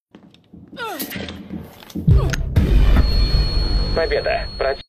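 Two brief glitches break into the audio, one from 1.12 to 1.17 s and another from 4.32 to 4.37 s, each lasting only about 50 to 56 ms. Both come from damaged data in a compressed stream: bytes in the encoded file at those points are wrong, so the decoder misreads the affected frames, loses its place in the bitstream and hunts for the next valid frame header.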